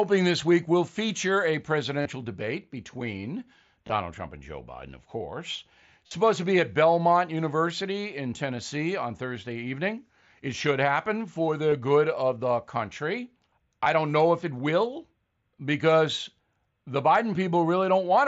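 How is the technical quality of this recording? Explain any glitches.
The recording carries five short glitches from concealed Bluetooth headset packet loss. They fall at 2.02 to 2.06 s, 3.87 to 3.90 s, 6.06 to 6.11 s, and briefly at 11.71 s and 13.84 s. The speech reaches up to about 8 kHz, as the mSBC headset codec allows.

When headset packets went missing, the receiver filled each gap by repeating the best-matching stretch of the waveform just before it. So instead of silence, each gap holds a buzzy tone at full level, with a slight warble where real speech resumes. The longest, about 45 ms at 6.06 s, fits a run of several lost packets. The two at 11.71 s and 13.84 s last about 15 ms each. That full-level buzz, rather than a drop to silence or a sharp click, is what separates concealed loss from a plain dropout.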